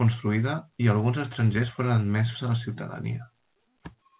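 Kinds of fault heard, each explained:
No faults can be heard in this speech. The call path sounds like G.711 A-law at 64 kbps, with nothing above 4 kHz, giving it the narrow band of an ordinary phone line.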